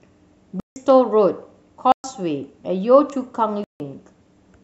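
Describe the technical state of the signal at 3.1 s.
At 3.10 s there is a bit error spike: a single flipped bit makes one sample jump by a power of two and snap straight back. It sounds like one isolated, sharp tick spread across the whole spectrum, unrelated to the surrounding speech.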